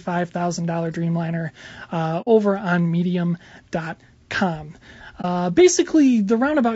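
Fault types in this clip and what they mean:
low-delay AAC compression: The speech sounds plainly rough and grainy throughout, with noise between the pitch harmonics and a thin, synthetic top band. This is likely low-delay AAC-ELD, whose short frames resolve pitch poorly, running at a bitrate that fits about 32 kbps.
AAC frame loss with muting: Missing coded frames were replaced with silence, and the overlapping windows fade the sound out and back in. There is a soft-edged hole at 2.21 to 2.28 s, fitting two lost frames, and a brief dip at 5.21 to 5.25 s, fitting one.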